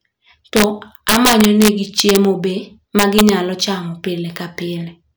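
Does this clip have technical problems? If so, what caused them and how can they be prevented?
Yes. In this speech clip, an integer overflow occurs three times: a gain or summing stage pushes samples past the largest representable integer, and instead of being limited they wrap round to the opposite sign. Each overloaded peak flips across the full range, producing harsh cracks far sharper than clipping, from 0.57 to 0.64 s (about 2 dB over), 1.09 to 2.17 s and 2.99 to 3.29 s (both about 5 dB over). Using saturating arithmetic or a limiter ahead of the fixed-point stage prevents this.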